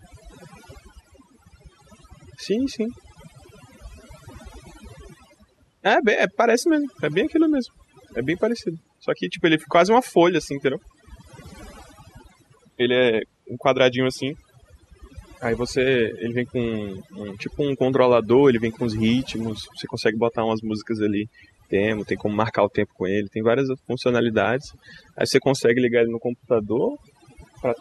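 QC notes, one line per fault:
Throughout: overdone noise removal. The denoiser is set far too aggressive, pulling individual frequency bands down or off whenever they sit near its noise estimate. The background collapses into near silence with twinkling specks. Quieter parts of the speech are stripped too. Unlike plain low-bitrate coding, the artefacts cluster in the gaps and soft passages.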